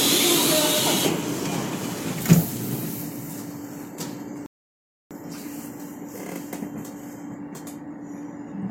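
A rebuffering stall runs from 4.46 to 5.11 s. Playback outran the downloaded data, so the player had nothing left to decode and simply halted until more audio arrived. The sound drops abruptly to silence for about 0.65 s, then picks up at exactly the point where it broke off, with nothing skipped or repeated. The content stays intact, but the gap stretches the clip's running time by that same 0.65 s.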